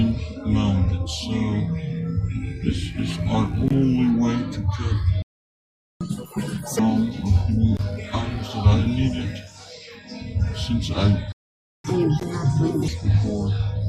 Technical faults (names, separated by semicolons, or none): playback stall; catch-up at higher speed